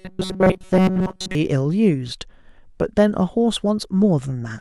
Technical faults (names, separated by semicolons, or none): robotic sound from repeated short buffers